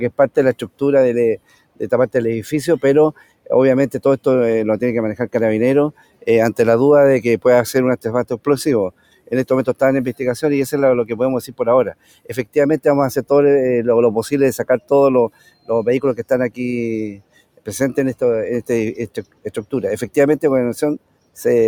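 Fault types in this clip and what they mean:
Noise suppressor applied to music or sounds: A speech noise suppressor stays active across the whole clip. It treats sustained tones and ambience as noise. Levels swing by about 15 dB, so held sound pumps and thins while sharp onsets pass more intact.
Sound cut by the noise suppressor: Seven stretches get pulled down hard, by about 18 dB at worst. They fall at 0.11–1.81, 3.13–3.98, 5.92–6.27, 8.32–9.75, 11.49–12.56, 14.79–17.67 and 19.08–21.38 s. Sustained parts and decays sink or cut short there.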